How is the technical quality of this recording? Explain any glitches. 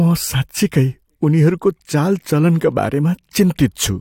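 The technical quality of this recording is good, with no glitches to explain.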